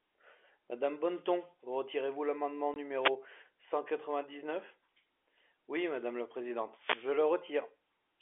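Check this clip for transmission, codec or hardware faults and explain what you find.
The speech carries two kinds of transmission fault: one brief dropout and two bursts of radio-microphone noise. It also passes through a telephone-band path limited to roughly 300 Hz to 3.5 kHz, which fits 64 kbps G.711 A-law coding.

Packet loss filled with silence, at 2.74 to 2.76 s. The sound simply vanishes for 20 ms, which fits a single lost 20 ms packet. The receiver had nothing to play for that slot and inserted digital silence rather than concealing the gap. Because the waveform is cut off and then restarted abruptly, the hole has hard edges in the speech.

Wireless microphone noise hits, at 3.0 to 3.12 s and again at 6.75 to 7.15 s. The analogue FM radio link from the microphone faded as reflected copies of the signal partly cancelled at the receiver. With the carrier weakened, the receiver's own noise rose and covered the speech. 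The first hit is a short swish of about 0.12 s. The second lasts about 0.4 s and is a longer burst of static over the speech.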